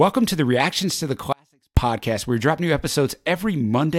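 A speech recording with an audio dropout to a faint residue from 1.33 s to 1.77 s, lasting about 0.44 s. After "to the" the speech cuts off abruptly, leaving only a faint leak roughly 35 dB below normal level, then returns just as sharply on "where we drop new". The hard edges and surviving trace point to a likely brief loss of the signal feed while the downstream path stayed live.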